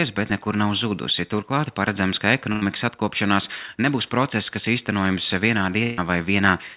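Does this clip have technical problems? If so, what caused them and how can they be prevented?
Yes, there are two bursts of packet loss. At 2.52 to 2.63 s, right after "paredzams ka", about 100 ms of audio goes missing. The receiver stretches the last sound into a fading buzz before jumping ahead to "atkopšanās nebūs process kas". The same thing happens at 5.83 to 5.99 s after "process kas īstenojams vienā", with about 140 ms lost. Steadier network routing, or adding forward error correction or redundancy, would prevent this.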